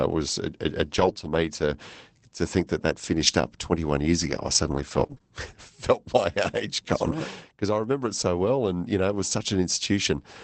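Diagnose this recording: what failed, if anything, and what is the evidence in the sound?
Scattered short gaps appear in the speech between 0.97 and 5.22 s. This is a network-stage fault: a handful of packets, about four, arrived late or not at all, and the receiver's concealment filled each hole by extending the preceding sound. Each dropout is brief, the longest around 20 ms, so it registers as a tick, smear or hiccup. The repair smoothing spans about 720 ms, all heard through the call path's 8 kHz audio ceiling.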